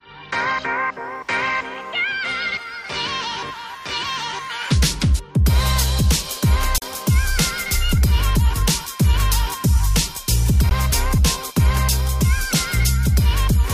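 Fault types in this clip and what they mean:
Block of digital silence: the audio drops abruptly to silence and returns without fades. There is a 40 ms gap at 6.78 s and a 16 ms gap at 10.69 s.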